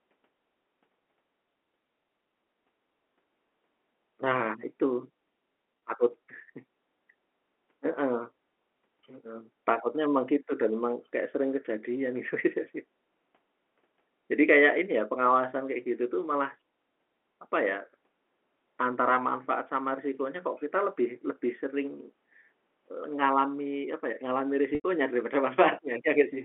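Packet loss with pitch repetition hits this telephone-band speech at 5.79 s and 24.75 to 24.84 s. The receiver loops the last pitch period to bridge each gap: the 30 ms dropout sounds like a brief buzzy hold, while the 90 ms one, fitting about three lost packets, fades to silence before speech cross-fades back.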